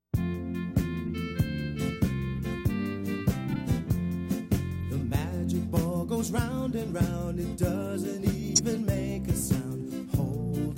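Corrupt frame decoded at 1.06, 2.36, 3.51, 4.81 and 8.47–8.60 s: damaged compressed frames played anyway, giving short chirps, squeaks, blips or bursts of noise, with the last the longest and loudest. Spectrograms show brief vertical smears of misplaced energy.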